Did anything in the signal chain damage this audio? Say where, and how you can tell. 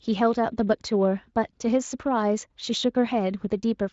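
No, nothing in the chain damaged this speech. It has been through the Speex codec, and the only trace is a slight coding texture that fits a fairly high bitrate setting.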